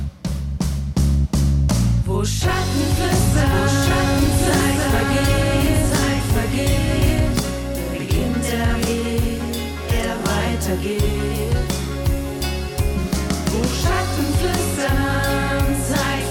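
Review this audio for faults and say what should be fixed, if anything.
A doubled audio track runs from 3.13 s to 7.39 s: a second full-band copy trails the original by about a second and a half, at roughly equal level, with no decay or room colour, and cuts in and out abruptly. This is likely a second capture through a slower routing path summed into the mix. Prevent it by auditing the signal routing so each source reaches the mix bus only once.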